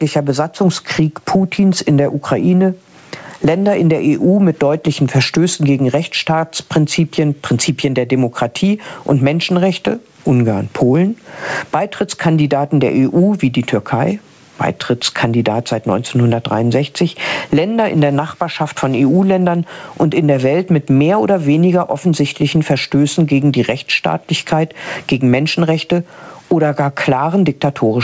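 Right through the clip there's gain pumping: the level is pulled down on each loud sound, with a swing of roughly 20 dB. The likely cause is input gain set far too high, so a fast limiter or compressor keeps clamping down on every peak and releasing in between. Loud and quiet moments end up squashed close together. Everything also stops at 8 kHz, as you'd expect from a wideband call path.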